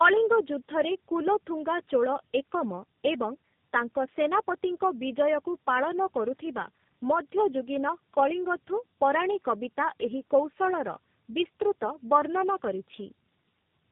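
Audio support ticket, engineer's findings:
Tandem speech coding, whole clip. Speech rough, muffled and warbly throughout, worse than any single low-rate codec would leave it; nothing above 3.8 kHz. Sounds like about three speech codecs chained, with the last probably AMR-NB, each one re-encoding the previous codec's already-damaged output. So the call likely crossed several network borders with a decode/re-encode at each hop, and the errors stacked.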